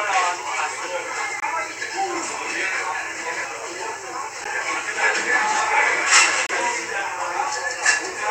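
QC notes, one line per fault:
1.40–1.42 s, 4.44 s, 6.47–6.49 s: gap at a join of encoded pieces. Silences of 23, 12 and 27 ms cut the continuous sound. Untrimmed encoder delay and padding leave them, with smeared edges.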